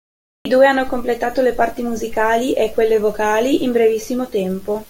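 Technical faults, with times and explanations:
0.00–0.45 s, cut-off start: the clip holds digital silence, then the speech enters abruptly at 0.45 s on "i due hanno completato", already mid-sound with no natural attack, because capture began late; unlike a dropout, nothing precedes the silence, and unlike a fade-in, the level never ramps.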